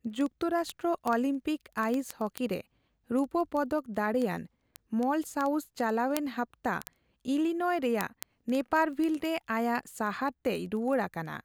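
A speech clip with sharp, uneven ticks at a steady rate of about twenty per second from 0.1 s to 11.4 s, roughly 200 in all. These are word clock ticks: the receiving device is not locked to the sender's clock, and a drift of a few hundred ppm drops or repeats one sample each time the clocks slip.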